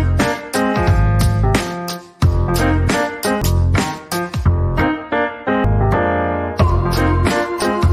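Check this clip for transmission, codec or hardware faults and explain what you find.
Two codec faults stand out, both of one kind. Damaged data in a compressed stream occurs at 3.42 s and 5.64 s: corrupted bytes make the decoder misread frames, lose sync and hunt for the next frame header, which leaves a brief chirp or blip in the sound.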